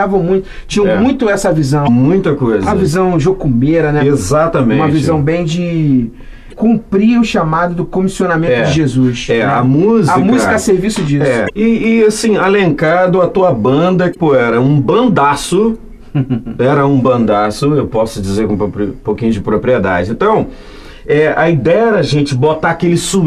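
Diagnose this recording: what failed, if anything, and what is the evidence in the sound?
The fault sits at the codec stage: damaged data in a compressed stream. Four short garbled blips, each about 40 to 45 ms, occur at 1.84 to 1.89 s, 6.49 to 6.54 s, 11.46 to 11.50 s and 14.12 to 14.16 s. Corrupted bytes make the decoder misread frames and hunt for the next valid header. The result is a chirp, squawk, click or short hole rather than the clean silence of packet loss or the single-sample tick of a converter click.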